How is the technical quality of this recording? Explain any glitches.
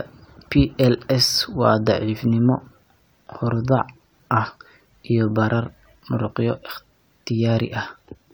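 No glitches or technical faults can be heard anywhere in the recording.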